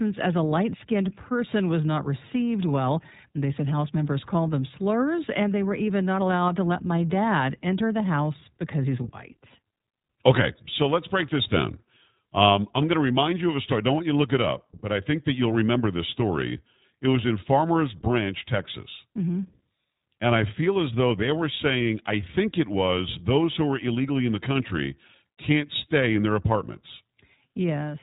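From start to end, the speech carries iLBC codec damage. Nothing above 4 kHz survives, so the sound is narrowband and muffled. Each 20 ms frame is coded on its own. The result sounds rough and slightly synthetic, which fits a bitrate near 15 kbps.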